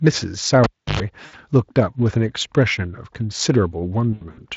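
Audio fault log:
0.64–1.00 s, cable pulled and plugged in: a pop as the live lead comes out, then about 313 ms of near silence while it's disconnected. As it goes back in, the tip touches first and picks up roughly 100 ms of 50 Hz mains buzz, since the ground isn't connected yet. A second pop lands as the plug seats fully and the sound comes back.
1.25–1.35 s and 4.13–4.41 s, VoIP packet loss concealed by the speech codec: the first gap is about 80 ms, which fits four consecutive 20 ms frames going missing. The decoder fills it by carrying on its last pitch and filter with falling gain, so the sound is stretched and fades. The second stretch is messier. About 140 ms is lost in patches across 240 ms, and the longest hole is 80 ms. Because each concealed frame builds on the previous one, the audio stays thin and distorted between the holes rather than snapping back cleanly. The Speex coding underneath is light.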